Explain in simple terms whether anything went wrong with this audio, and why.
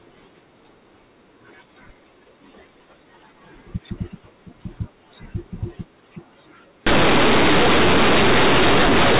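Something went wrong from 6.87 seconds to the end. The speech had been stored in the telephone system's mu-law format, which squeezes loud and quiet sounds onto one scale, but this last stretch was read back as plain linear 8-bit audio without undoing that squeeze. This fault is called companded audio read as linear. Quiet moments jump up to the size of loud ones, so the speech turns into harsh, loud, buzzy distortion with heavy noise in the pauses. Before 6.87 seconds, the telephone coding sounds as expected: narrow, with no high frequencies.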